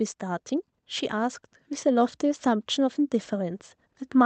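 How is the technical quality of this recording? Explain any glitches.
There's one glitch worth flagging. From about 1.1 to 2.74 s you get an automatic gain rising effect: the AGC decided the input was too quiet and eased its gain up by about 3 dB, so the speech and the background noise swell together rather than the talker getting louder alone.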